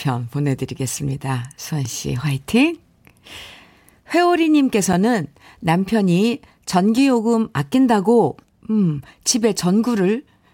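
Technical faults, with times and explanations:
1.85 s, block of digital silence: the speech drops to silence for 1.7 ms and snaps back with no fade, so both hard edges merge into one tick. The waveform shows a brief flat line at zero, and the spectrogram a thin broadband vertical stripe.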